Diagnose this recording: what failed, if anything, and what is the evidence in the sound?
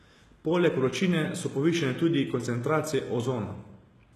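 HE-AAC compression, at the codec stage, runs through the whole speech recording. Codec damage is plainly audible from start to finish, and nothing is present above 12.3 kHz. The treble below that edge sounds bright but synthetic, and s sounds come out gritty and metallic. The likely cause is spectral band replication: the encoder keeps only the lower spectrum and rebuilds the highs by copying lower bands upward under a coarse envelope, so the treble harmonics no longer line up. The degree of damage fits a low bitrate around 16 kbps.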